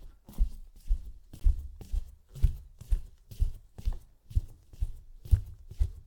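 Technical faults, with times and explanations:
1.40 s, gap between stream segments: the timestamps of two adjoining segments, which fit a segment length of 4 s, leave a hole the player fills with silence. The sound drops out abruptly for about 16 ms with hard edges, then resumes with nothing lost.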